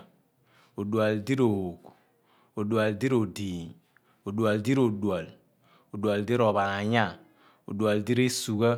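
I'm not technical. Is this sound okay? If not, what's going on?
Yes, this speech recording sounds okay. Nothing goes wrong with the sound at any point.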